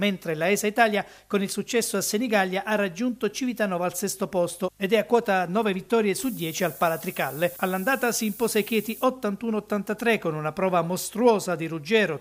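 From 6.18 to 9.04 s the signal is reduced to 7 bits, low bit depth with noise shaping, and the rounding error is pushed toward high frequencies. A steady, thin hiss that climbs sharply toward the top of the band results, sitting only about 10 dB below the sound.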